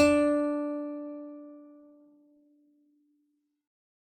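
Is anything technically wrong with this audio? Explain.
No, nothing technically wrong turns up anywhere in this music clip.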